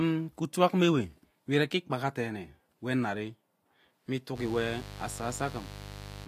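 Speech, with mains buzz entering at 4.34 s and lasting to the end at 6.28 s. It sits roughly 15 dB below the speech. A dimmer, rectifier or missing shield injects switching spikes 100 times a second, building 50 Hz harmonics into a raspy buzz.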